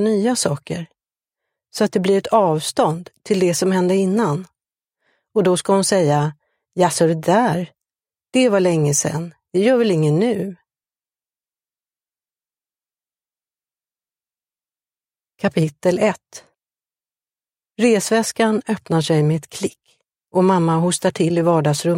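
No technical faults are audible.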